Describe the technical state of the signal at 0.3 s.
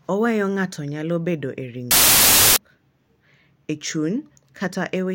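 Nothing is wrong with the signal at 0.3 s; the speech there comes through intact, with no audible fault at that moment.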